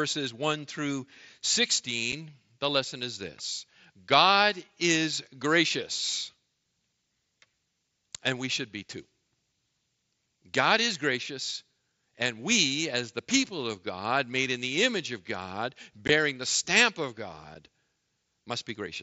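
Unconcealed Bluetooth headset packet loss leaves three tiny holes: 7.5 ms at 2.12 s before "the lesson is this", 15 ms at 16.08 s before "the stamp of", and 7.5 ms at 17.55 s after "the stamp of". Unpatched lost packets become short holes with abrupt edges.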